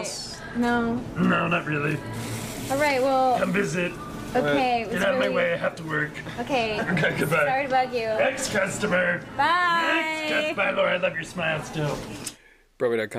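Listening through, nothing stood out as a technical fault at any point.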